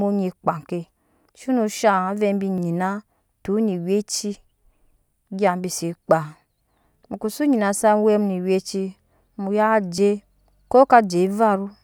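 At 1.78, 2.58 and 9.98 s the speech skips forward, likely a dropped buffer (overrun), seen as a waveform discontinuity and a thin vertical spectrogram line.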